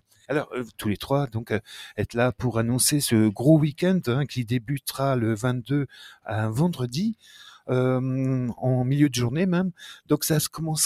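A noise suppressor applied to music or sounds stays active throughout, treating sustained material as noise, so the level pumps by roughly 5 dB as tails and held sound sink. The sound is cut by the noise suppressor at 0.00–0.29 s and 7.15–7.36 s, with drops of about 18 dB where the steady sound is judged to be noise and pulled down.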